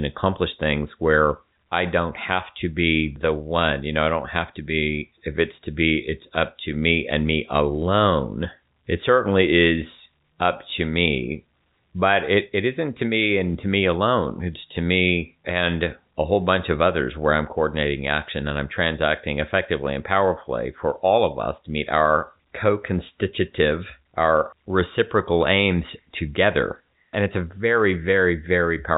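Speech over a G.711 A-law telephone path at 64 kbps, band-limited to 4 kHz as that coding requires, with no technical fault present.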